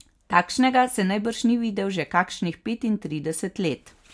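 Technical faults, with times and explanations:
Nothing here to flag: the speech comes across without any technical faults worth noting.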